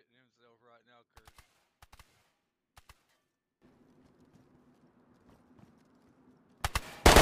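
From the start to 3.62 s the mono sum drops by about 23 dB, leaving a faint residue; the likely cause is one channel inverted, so shared content cancels. The waveform is nearly flat, and the spectrogram is much fainter until normal level returns.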